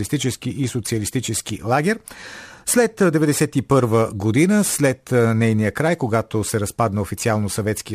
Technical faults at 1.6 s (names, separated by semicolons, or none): none